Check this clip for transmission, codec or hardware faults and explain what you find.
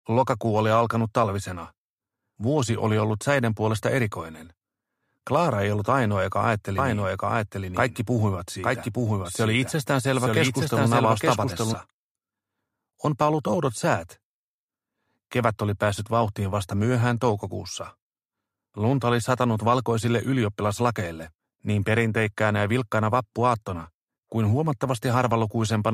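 One fault, a doubled audio track, from 6.78 to 11.74 s: an equally loud, dry copy trails about a second behind, likely from a slower second capture path.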